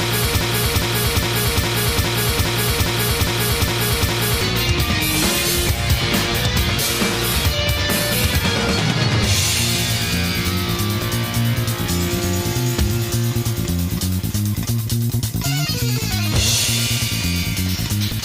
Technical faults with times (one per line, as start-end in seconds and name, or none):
0.00-4.41 broken-record loop